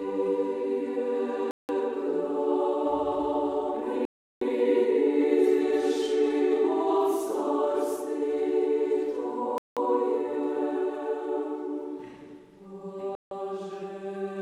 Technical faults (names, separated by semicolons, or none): Bluetooth stall